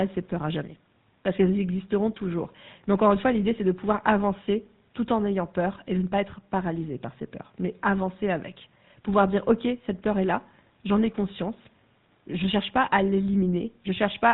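Throughout, the speech sounds buzzy and gravelly with nothing above 4 kHz, typical of the GSM full-rate codec, whose pulse-driven vocal-tract model fits a 13 kbps rate.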